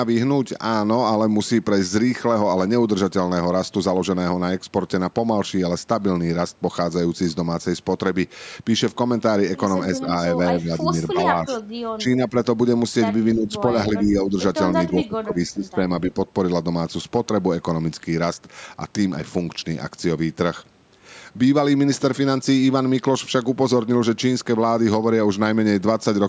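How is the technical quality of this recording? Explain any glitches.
The main problem is a cluster of level dips in the speech between 9.99 and 16.16 s, consistent with speech suppressed in double talk. They fall at 9.99–10.1, 10.62–10.88, 11.13–11.5, 11.72–12.35, 13.35–13.48, 13.88–14.37, 14.88–15.81 and 16.08–16.16 s. Each one sounds like the talker briefly pulling away, with drops ranging from about 5 dB to about 15 dB. The deepest and longest dips are at 11.72–12.35 s and 14.88–15.81 s.

The likely cause is an echo canceller that, while the far end was also talking, could not tell this talker apart from the loudspeaker echo and attenuated the whole signal.

The band stops at 8 kHz, which fits ordinary call microphone processing.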